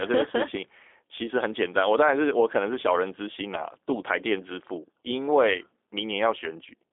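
From start to end, the speech carries G.729 codec damage that is plainly audible: a rough, synthetic quality that fits an 8 kbit/s G.729A-style coder. The speech is rebuilt from a vocal tract filter, a pitch predictor and a few pulses per frame, and the band runs from 300 Hz to 3.6 kHz, with nothing above 3.8 kHz. That roughness sets it apart from simple band-limiting, which narrows the sound without making it synthetic.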